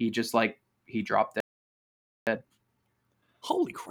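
At 1.40 s the speech cuts off mid-flow and the output falls completely silent for about 0.87 s, until 2.27 s. This is a playback stall. The abrupt gap, with nothing audible in it, is most likely the player running out of buffered data or having its audio thread blocked, so no samples reached the output until it recovered.

From 2.27 s to the end of the clip the speech resumes sounding hurried but at its normal pitch. This is time-compressed catch-up. Having fallen behind during the stall, the player works through its backlog by trimming small slices of audio and cross-fading across the joins. That runs the material at about 1.25 times normal speed without shifting pitch.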